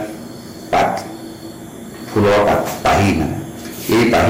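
Hard clipping appears three times. From 0.73 to 0.91 s, the signal is driven about 14 dB past what the stage can pass. Its peaks are sliced flat. That adds a burst of crackle. From 2.16 to 3.26 s, the overload rises to about 20 dB. Every loud moment turns to harsh fuzz. The flattened tops spray harmonics high into the spectrum. From 3.89 s to the end, about 18 dB of overdrive brings the fuzz back.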